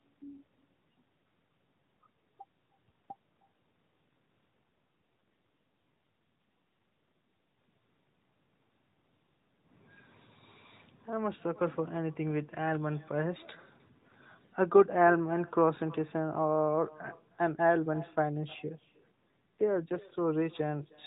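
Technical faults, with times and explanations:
Throughout: echo with no canceller. Every phrase is trailed roughly a third of a second later by a faint, thinner copy about 24 dB below the speech. The far end's loudspeaker feeds its microphone and nothing strips that return. Unlike room reverberation, the copy arrives as a distinct delayed repeat rather than a smooth tail.
4.64–7.58 s and 19.26–20.15 s: AMR rate drop. Within the narrowband mobile sound, which already stops at 4 kHz, the speech turns buzzier and more synthetic, consistent with the codec being switched from 12.2 to about 5.9 kbps on a weak link. Unlike a dropout, the band holds and nothing goes silent.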